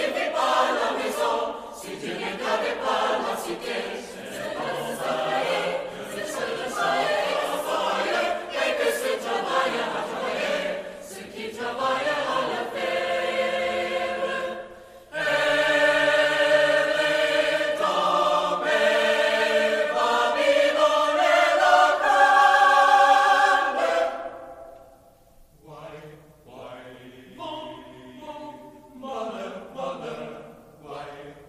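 No technical faults can be heard anywhere in the audio.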